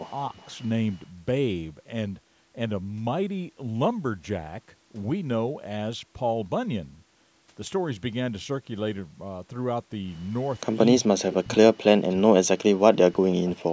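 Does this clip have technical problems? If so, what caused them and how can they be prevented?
Yes. At 0.28–0.39 s the speech dips by about 20 dB, and at 10.99–13.54 s it drops by up to about 40 dB. This is likely speech suppressed in double talk, where the canceller ducks overlapping speech. Better double-talk detection in the echo canceller prevents this.

At 0.38–0.46 s, a faint copy of the speech returns 352 ms late at about 35 dB below it, likely an echo leak from the loudspeaker path. Headsets or stronger echo cancellation prevent this.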